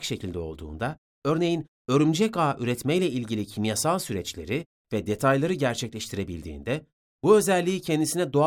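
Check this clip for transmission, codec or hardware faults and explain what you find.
Nothing stood out on listening to this speech recording; no transmission, codec or hardware problem could be heard.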